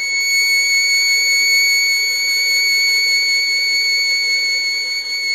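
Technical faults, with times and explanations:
Throughout, HE-AAC compression: the music's treble is synthetic, with nothing above 14.9 kHz and plainly audible damage. This is likely spectral band replication rebuilding the upper bands from copied lower ones, which fits a bitrate around 24 kbps, so the upper harmonics misalign.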